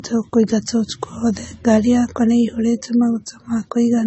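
Speech runs throughout with a hard ceiling at 8 kHz, shown on a spectrogram as a flat edge with nothing above it, plus artefacts that mix two kinds of coding artefact. This points to transcoding between lossy codecs, likely MP3 at a low bitrate and then AAC-LC.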